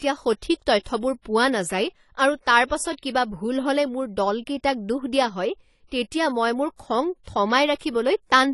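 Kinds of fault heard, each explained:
AAC compression: The speech sounds dull and smeared, with a warbling, fizzy texture on sibilants, and nothing reaches above 11.4 kHz. A spectrogram shows a flat ceiling there throughout, likely from AAC-LC coding at a low bitrate around 32 kbps.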